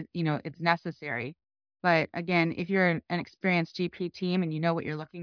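There are no technical faults to describe in this speech recording.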